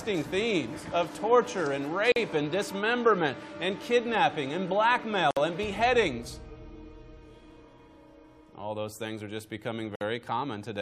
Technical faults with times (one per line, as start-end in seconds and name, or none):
2.12-2.16 gap at a join of encoded pieces
5.31-5.37 gap at a join of encoded pieces
9.95-10.01 gap at a join of encoded pieces